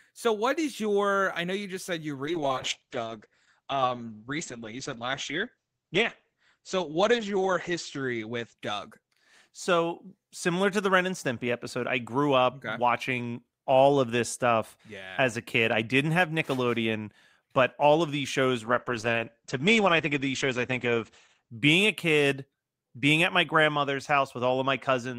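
At 2.26 s the speech goes muffled and watery: a call bitrate drop. The bandwidth estimate fell, the encoder got squeezed from something like 32 kbps to around 9, and the top end collapses from 20 kHz to 8 kHz. It sits at its worst for about 5 s and recovers by 10.57 s. The same thing happens again from 18.66 to 21.57 s, bottoming out near 10 kbps for most of that stretch.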